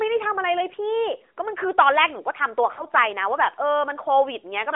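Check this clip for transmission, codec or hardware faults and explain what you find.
One fault stands out: lost AMR speech frames between 2.74 and 2.85 s. On this narrowband mobile path, which passes only about 300 Hz to 3.5 kHz, a short run of coded speech arrived corrupted. The decoder bridged it by repeating its last good pitch and vocal tract settings at falling gain, consistent with two lost 20 ms frames. The sound smears into a brief, sagging warble, then returns weak or rough for a moment. Unlike a hard dropout, it never cuts to clean silence.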